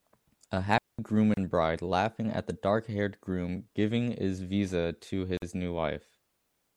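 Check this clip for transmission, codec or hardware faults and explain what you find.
Two kinds of fault are present: one wireless dropout and two gaps at joins between separately encoded pieces.

From 0.78 to 0.99 s there is a digital wireless dropout. The speech vanishes for about 206 ms into near silence. No noise burst comes before or after it. The receiver got too little valid data from the link and muted its output with a very quick fade. The result is a clean hole rather than crackle or hiss.

At 1.34 to 1.37 s, just before "bride laughing at the", there is a gap at a join of encoded pieces. It lasts about 32 ms. A second gap of about 49 ms runs from 5.37 to 5.42 s, right after "giving is visa to". The gaps recur every 4.0 s, which points to pieces about four seconds long. Each piece was encoded on its own and joined untrimmed. The encoder's start-up delay and last-frame padding stayed in. 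The speech drops out abruptly, with smeared edges, then resumes exactly where it stopped.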